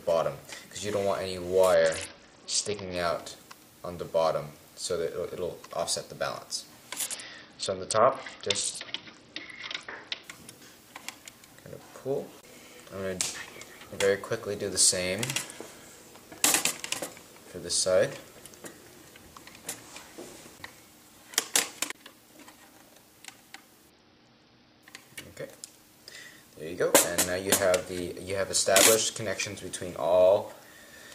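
Bluetooth SBC bit pool drop at 1.74–2.96 s, 7.06–10.24 s and 23.90–24.83 s: treble dulls and gritty noise rises as the upper sub-bands lose their bits and the rest are coarsely quantised, which points to the bit pool falling from 31 to 7, about 61 kbps.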